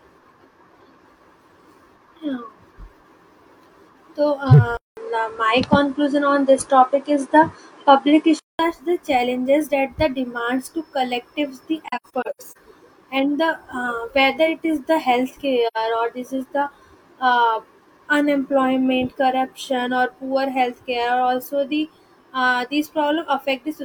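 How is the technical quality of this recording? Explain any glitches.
The recording has a few noticeable glitches. From 4.77 to 8.59 s the sound goes dull, topping out at 10.5 kHz, with a 200 ms gap and a small level jump. That's likely the input switched to a poorer device.

At 11.88 to 12.57 s and at 15.67 s there's AAC frame loss with muting. The lost frames come out as soft-edged silent holes, about 340 ms scattered in the first stretch and 85 ms in the second.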